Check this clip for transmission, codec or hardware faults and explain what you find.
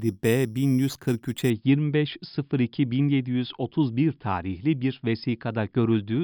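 There's one fault, at the start. From 0.0 to 1.5 s, imaging from sample-and-hold upsampling adds a metallic fizz to the speech, about 22 dB down, with mirrored copies from about 5.5 to 11 kHz. That fits audio raised from about 11 kHz by repeating samples without smoothing.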